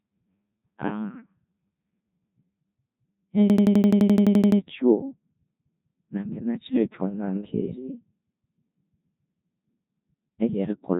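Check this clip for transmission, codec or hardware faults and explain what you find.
Two faults affect this speech clip: a low-rate vocoder across the whole recording and a brief hang loop.

Codec 2 vocoder, throughout: the audio was sent as pitch, voicing, energy and spectral-envelope parameters, then rebuilt from sine waves. The heavy damage points to a very low-rate mode near 1.2 kbit/s. Speech sounds robotic and buzzy, with nothing above 3.8 kHz.

System hang loop, 3.50 to 4.61 s: the system froze while the sound hardware kept replaying the same ring buffer, which fits a 4096-sample buffer. One 85 ms slice repeats 13 times at 11.7 Hz, producing a rapid, machine-gun-like stutter.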